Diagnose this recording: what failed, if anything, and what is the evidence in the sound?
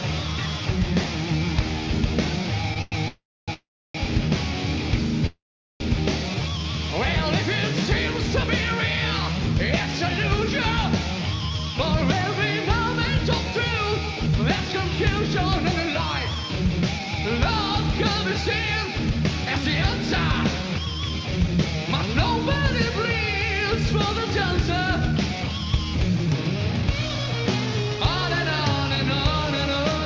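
Network and jitter buffer trouble here, on a call path that sounds like G.722 with nothing above 8 kHz. First up is a short stall from a late packet at 2.74 s: one sound gets held about 18 ms too long while the buffer sits empty, then picks up right where it left off.

Then a run of call audio freezes, likely from packets held up in transit. At 2.82 to 2.94 s there's a 0.1 s smeared hold. Longer ones at 3.08 to 3.50 s and 3.54 to 3.96 s fade into roughly 0.3 s of silence each. At 5.26 to 5.82 s about 0.54 s is inserted, with 0.42 s dead. Nothing's lost; the audio just resumes late.

A jitter buffer slow-down follows at 6.35 to 6.64 s. The buffer rebuilds its reserve by repeating pitch periods, adding about 54 ms. Playback drops to 85% speed at unchanged pitch, so sounds drag.

Finally there's jitter buffer speed-up at 103% from 9.79 to 21.83 s and 24.25 to 29.53 s. The receiver trims tiny pitch-period slices to shed excess buffered delay, around 0.3 s and 0.2 s respectively. 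Pitch holds.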